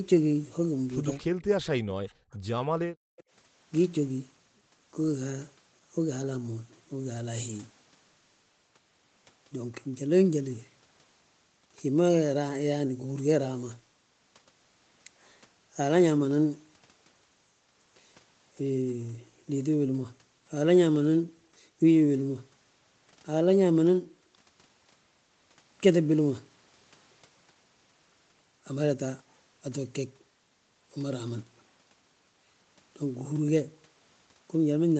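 At 1.12 s a faint copy of the speech appears for a few hundredths of a second. It trails the original by 233 ms and sits roughly 30 dB below it. This is an echo leak. The far side likely plays the call on a loudspeaker, and its echo canceller let a scrap of that sound back into the microphone.

From 1.21 to 1.38 s the room sound drops away, by about 38 dB at its deepest, for around 150 ms. This is background gated by the echo canceller. It clamped the microphone hard while the loudspeaker played, then released it.

At 1.39 s the echo leak returns, again delayed by 233 ms and even weaker, around 40 dB down.

From 1.79 to 2.31 s the talker's speech sinks by as much as about 40 dB over roughly half a second. This is speech suppressed in double talk. Both sides were likely talking at once. The canceller could not tell the local speech from the loudspeaker echo, so it turned everything down.

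From 2.76 to 3.17 s the background is gated again. It falls by about 40 dB for roughly 400 ms.

Right as it comes back, at 3.17 s, another echo leak follows. It lasts until 3.24 s, with the same 233 ms delay, and sits roughly 30 dB below the speech.

Throughout, the call path limits the audio to 8 kHz.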